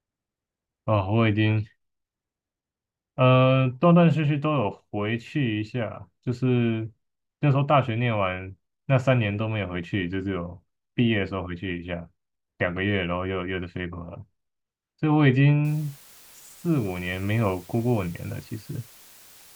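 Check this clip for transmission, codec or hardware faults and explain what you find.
One fault is present, in the final seconds of the speech. From 15.65 s to 19.56 s, low bit depth with dither: the signal is rounded to very few levels, which fits about 7-bit resolution, with dither added first. The rounding error becomes a steady, even hiss without distortion, roughly 25 dB below the speech.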